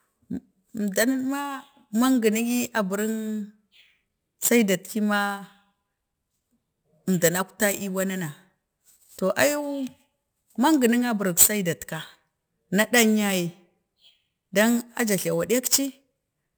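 From start to finish, the speech carries imaging from sample-and-hold upsampling. Each original sample was simply repeated to reach the higher rate, with no smoothing filter, which fits a conversion from about 22 kHz up to 48 kHz. Mirrored copies of the speech spectrum fill the band from about 11.03 kHz to 22.05 kHz at about 13 dB below the signal, heard as a bright metallic fizz that rises and falls with the speech. On a spectrogram this appears as an inverted reflection of the speech harmonics above 11 kHz, tracking every syllable. Zoomed in, the waveform shows small stair-steps.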